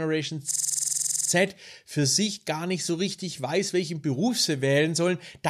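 From 0.51 to 1.30 s the speech locks into a system hang loop. The driver stalled while the hardware kept replaying its ring buffer, so a 46 ms fragment repeats 17 times as a rattling 21.5 Hz stutter. That fits a 2048-sample buffer. Speech resumes at "für sich gar nicht".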